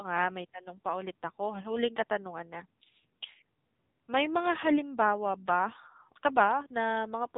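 The whole speech clip carries the AMR narrowband mobile codec sound. Nothing reaches above 3.8 kHz. Heavy low-bitrate coding, likely near 6.7 kbps, makes the voice buzzy and synthetic.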